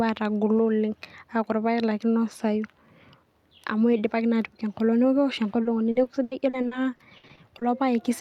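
From 5.63 to 7.63 s, the speech breaks up with repeated packet loss, giving a robotic sound. About a dozen short holes appear, the longest 80 ms. Each is patched by stretching the previous sound, covering roughly a fifth of the span. It sounds choppy.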